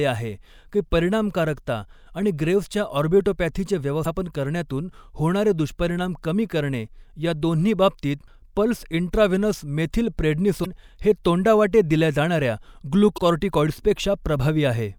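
At 4.02 s, right after "परिणामकारकता आणि ग्रेव्सच्या ऑर्बिटोपॅथीचे", there's a 40 ms glitch from damaged data in the compressed stream. The decoder trips over bad frames and hunts for the next header. The same glitch recurs at 10.62 s, before "हे तोंडावाटे दिल्या", and at 13.14 s.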